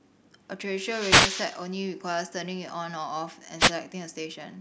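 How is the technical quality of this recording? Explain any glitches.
The recording has two wireless microphone noise hits, at 0.73–1.68 s and 3.58–3.72 s. The FM radio link fades as reflected signals cancel, so receiver hiss swells into a swish of static over the speech. A digital dropout would go silent instead.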